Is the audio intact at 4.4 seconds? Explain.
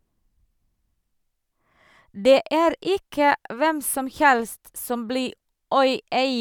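Yes, the speech at 4.4 seconds is intact, with no fault audible at that moment.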